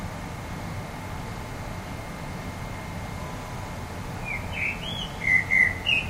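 No technical faults can be heard anywhere in this recording of sounds. Nothing in it calls for a timestamp or any further comment.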